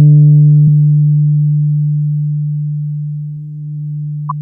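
A short glitch cuts through the sound at 0.64 s and again at 4.27 s, each about 40 ms long. Both are damaged data in a compressed stream: corrupted bytes made the decoder misread those frames and lose sync until it found the next valid frame header.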